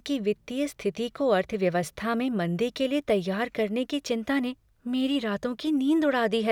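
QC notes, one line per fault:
No faults found in this speech clip.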